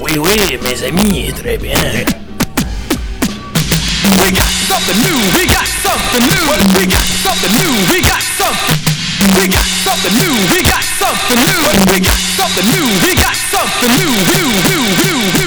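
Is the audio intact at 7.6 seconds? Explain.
No. Integer overflow runs through the whole clip, including 7.6 s. The level is pushed about 3 dB past full scale, so around one percent of samples wrap to the opposite extreme instead of being limited, giving violent cracks far sharper than clipping's flattened buzz.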